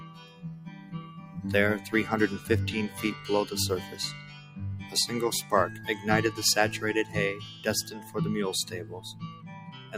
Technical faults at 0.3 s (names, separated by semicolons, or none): noise suppressor applied to music or sounds; sound cut by the noise suppressor